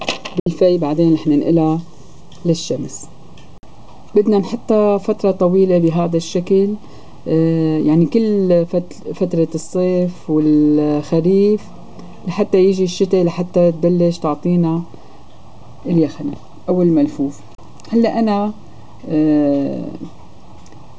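The audio twice drops abruptly into silence, from 0.40 to 0.47 s and again from 17.55 to 17.59 s, with a very fast fade of about 3 ms each time. This is digital broadcast dropout: the receiver muted when frames were lost, and the 64 ms and 32 ms gaps fit two frames and one frame, so that audio is gone.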